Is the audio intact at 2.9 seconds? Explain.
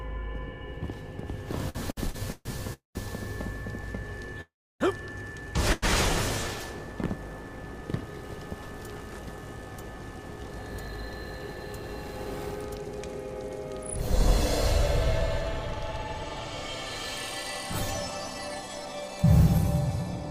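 No. A call audio freeze runs from 2.73 to 2.97 s, so 2.9 s falls inside it. The last sound is stretched into a short buzz that fades out, followed by about 140 ms of silence, roughly 0.22 s of filler in all. The likely cause is packets held up in transit, which starved the jitter buffer. When they arrived, playback resumed exactly where it had stopped, so nothing is lost, but everything afterwards lands about 0.22 s late.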